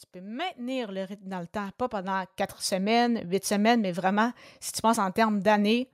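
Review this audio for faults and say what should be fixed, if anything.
Automatic gain rising runs from 0.12 s to 4.1 s: the gain control judged the input too quiet and ramped up about 13 dB, so speech and background swell together. A waveform shows a steadily widening envelope; a spectrogram brightens uniformly, noise floor included. Set input level correctly and slow or disable the automatic gain control.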